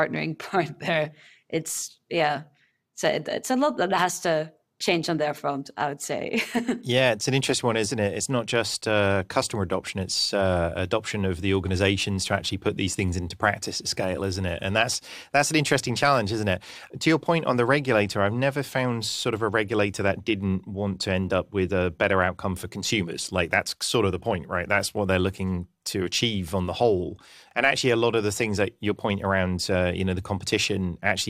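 No faults can be heard anywhere in the recording.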